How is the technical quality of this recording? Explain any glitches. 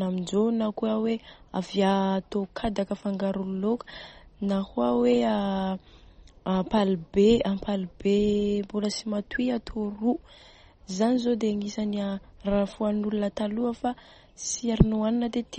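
The technical quality is poor, with clearly audible coding damage throughout. This is likely MP3 compression. Nothing is left above 8.4 kHz, and weak spectral lines switch on and off between frames, giving a watery, swirly texture and metallic chirps on s sounds. That pattern fits a low bitrate around 32 kbps. A plain low-pass filter would dull the treble without the swirl.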